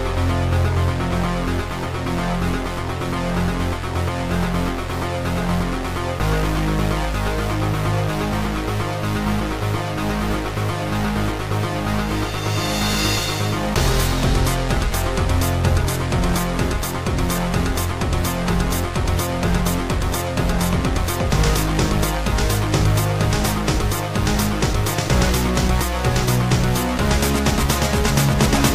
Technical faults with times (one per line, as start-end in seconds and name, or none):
none